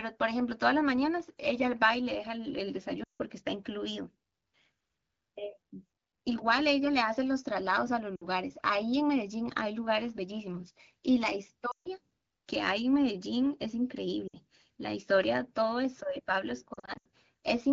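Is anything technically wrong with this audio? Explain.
Yes, there are lost AMR speech frames at 3.04–3.22 s, 8.16–8.26 s, 11.71–11.88 s, 14.28–14.36 s, and scattered across 16.73–17.06 s, where the longest run is about 80 ms. Corrupted radio frames were discarded, and the decoder re-used the last good pitch and vocal-tract settings while ramping the gain down. The sound therefore dips or warbles and drops to near silence within two frames, and then returns weak or rough for a moment. That brief fading decay distinguishes it from a plain dropout, which would cut abruptly to silence.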